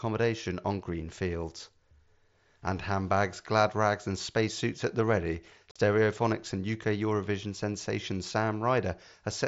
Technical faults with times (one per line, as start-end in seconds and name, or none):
5.71-5.76 unconcealed Bluetooth headset packet loss